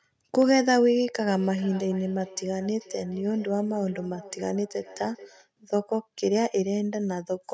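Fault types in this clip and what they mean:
Loud pop: A single sharp pop sits on top of the speech from 0.42 to 0.44 s, peaking roughly 5 dB above the speech level while the speech continues underneath. The likely cause is a sudden voltage step or pulse, such as a plug being seated, a switch, static discharge or a driver glitch, entering the signal chain. The downstream circuitry then shapes that pulse into a brief, hard transient.
Feedback echo between two devices: From 1.28 to 5.5 s the speech comes back as a delayed copy about 0.4 s behind the original, at most about 20 dB below the direct speech. Two devices in the same room share the call. One plays out what the other's microphone captured, and that microphone hears it again. Each echo canceller only removes its own device's playback, so the loop's return passes through.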